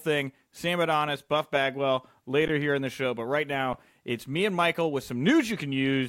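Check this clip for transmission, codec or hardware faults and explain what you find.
Two brief underruns with held sample interrupt the speech, at 2.48 s and 3.73 s, lasting about 11.6 ms and 8.7 ms. The output buffer ran dry, so the converter froze on its last value; the first gap fits a 512-sample buffer. Playback resumes where it stopped, so each gap is a soft, flat hiccup. Unlike a dropout to silence, the waveform holds at its last value rather than snapping to zero, so there is no sharp click.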